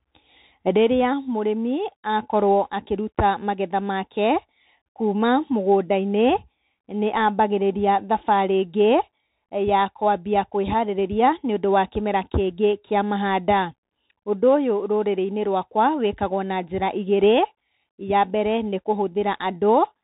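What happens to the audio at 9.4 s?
At 9.4 s the speech is passing through the Bluetooth CVSD headset codec, as it does for the whole clip. One-bit up/down steps with adaptive size, consistent with a 64 kbps stream, cap the band at 4 kHz, leaving s sounds scratchy, loud highs distorted and a granular hiss underneath.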